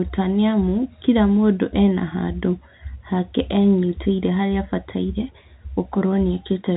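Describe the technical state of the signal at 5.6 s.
At 5.6 s the signal is intact, with no fault present, and the telephone-style G.711 coding passes nothing above about 3.8 kHz.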